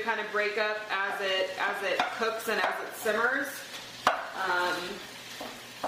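At 1.83 s the sound drops suddenly to a lower quality that lasts to the end. This is an adaptive stream at a lower bitrate. A slower connection made the player switch versions. Codec artefacts rise, with no gap, which fits a step from about 64 to 24 kbit/s.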